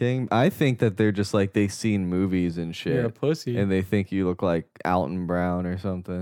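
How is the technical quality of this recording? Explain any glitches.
Quality is marred by one continuous glitch. From 0.1 s to the end, a soft rattle of tiny ticks, about fifty a second, runs under the speech. These are likely clock slip clicks: two unsynchronised devices drift apart by around a tenth of a percent, so single samples keep being dropped or repeated.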